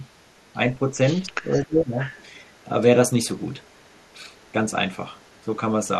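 At 0.07 to 0.13 s, a very faint delayed copy of the speech appears, 252 ms behind. This is an echo leak. The likely cause is an echo canceller on a loudspeaker end that let some of the returned sound through.

The speech then dips briefly at 0.91 to 1.0 s, by a few decibels. A deeper loss follows from 1.25 to 1.99 s, around 15 dB down. This is speech suppressed in double talk. Both ends likely talked at once, and the canceller turned this side down too.

The echo leak returns with a 330 ms delay. It is strongest at 2.01 to 2.28 s, about 15 dB under the speech. Fainter scraps follow at 2.54 to 2.64 s, 3.38 to 4.16 s, 4.34 to 4.52 s and 5.14 to 5.43 s.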